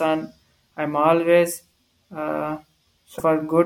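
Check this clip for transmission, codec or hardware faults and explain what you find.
There is one fault, near the end of the speech. From 3.15 to 3.21 s, about 60 ms, there is damaged data in the compressed stream. Some bytes in the encoded frames there are wrong. The decoder cannot read those frames correctly, so it loses sync and scans ahead for the next valid frame header. The result is a short, harsh blip that cuts across the speech.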